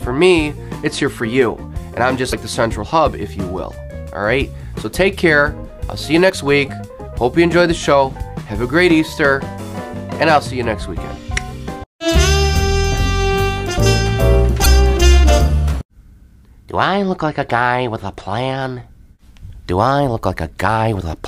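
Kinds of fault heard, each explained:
Damaged data in a compressed stream: brief glitches at 2.31 s, 6.26–6.31 s and 14.62–14.66 s, none longer than 50 ms. Corrupted bytes in the encoded stream make the decoder misread those frames, lose sync and search for the next frame header.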